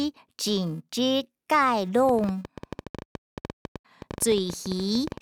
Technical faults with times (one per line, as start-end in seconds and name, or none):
0.00-5.21 filter restarted on every block
2.09-5.18 train of clicks